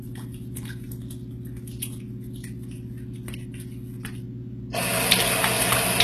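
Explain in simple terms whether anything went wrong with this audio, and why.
Throughout, the treble sounds gritty and metallic, and nothing reaches above about 12.3 kHz. This is likely HE-AAC compression, which rebuilds the highs by copying lower sound upward.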